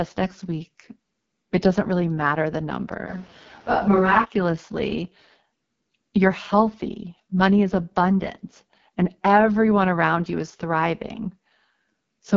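Throughout, the speech passes through the AMR wideband (HD Voice) codec at a very low rate, which fits its lowest 6.6 kbit/s mode. The coarse pulse model leaves the speech rough and raspy, and nothing is left above 6.8 kHz.

From 3.09 to 4.23 s, the recording likely switches to a distant microphone after the close one dropped out. The speech turns suddenly roomy, hollow and thin in the bass, with faint added room noise and little change in level, then snaps back.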